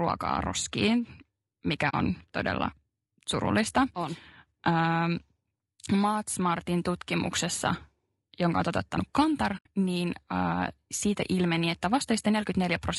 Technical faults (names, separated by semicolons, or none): low-delay AAC compression; AAC frame loss with muting